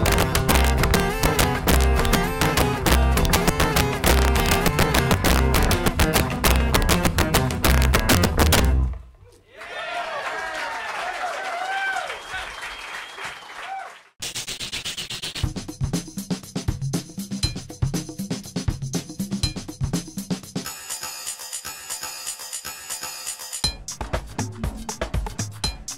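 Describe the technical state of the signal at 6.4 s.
At 6.4 s you're right in the middle of an integer overflow that runs from about 0.06 s to 8.65 s. The signal's being driven roughly 7 dB past the top of the integer range, and instead of clamping, any peak over the limit wraps around to the opposite sign, jumping across the full scale. So the loud moments come out as violent, snapping cracks, much harsher than ordinary clipping would give you.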